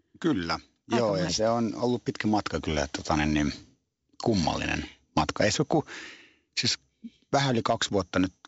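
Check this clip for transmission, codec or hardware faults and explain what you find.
Nothing stood out on listening to this speech, which comes through wideband telephone coding at 64 kbit/s.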